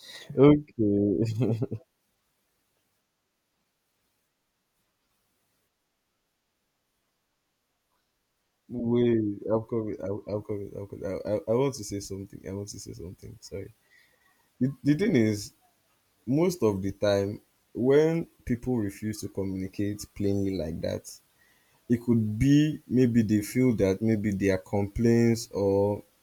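Nothing in this stretch of speech calls for comment on the technical side, as no faults turn up anywhere in it.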